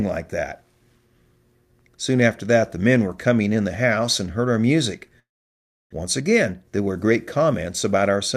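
Long network dropout, 5.19 to 5.95 s, right after "and heard our music": the sound smears into a fading buzz, then goes silent, and about 0.4 s of speech never returns, likely from lost packets.

Jitter buffer speed-up, 6.04 to 8.17 s: the receiver trims short pitch-period slices to shed around 150 ms of backlog, so speech runs about 8% fast at unchanged pitch and sounds hurried.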